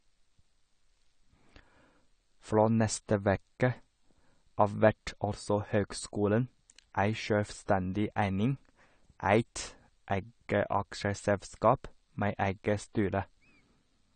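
Throughout, likely AAC compression at a starved bitrate, fitting about 32 kbps, removes everything above 9 kHz, leaving the speech dull and smeared, with fizzy, warbling sibilants.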